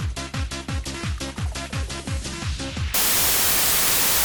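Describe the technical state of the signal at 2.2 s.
At 2.2 s the signal is intact, with no audible dropout, distortion, glitch or other technical fault at that point.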